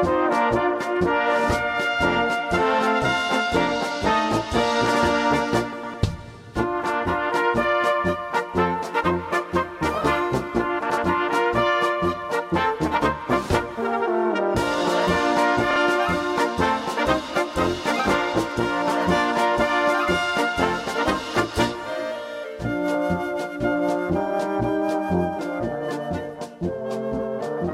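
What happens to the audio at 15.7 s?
At 15.71 s the audio has frames out of order, lasting until 15.76 s. Two neighbouring frames were swapped in transit and decoded in that wrong order. Each block is about 26.1 ms. The two halves of this brief stretch play exchanged. It comes across as a short garbled flutter. No time is lost.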